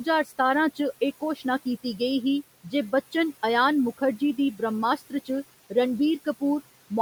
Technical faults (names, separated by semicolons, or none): noise suppressor artifacts; speech cut by the noise suppressor